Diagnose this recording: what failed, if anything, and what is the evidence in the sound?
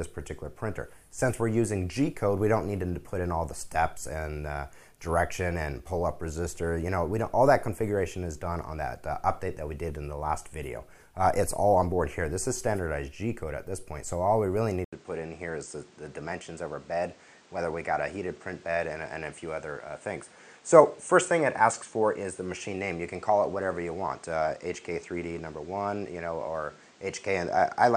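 Capture-device stage: at 14.85 s an 80 ms gap, then nothing above 9.1 kHz and new noise about 30 dB down, likely input switched to a poorer device.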